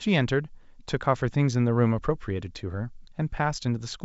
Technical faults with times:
none

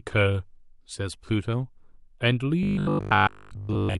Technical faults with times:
2.63-3.99 robotic sound from repeated short buffers

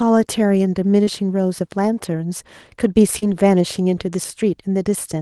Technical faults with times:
1.03-1.09 short concealed packet loss
3.19-3.26 short concealed packet loss

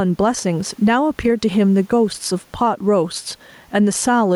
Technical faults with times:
0.00-4.36 gain pumping

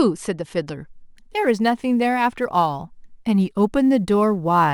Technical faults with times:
0.91-4.73 sample clock jitter

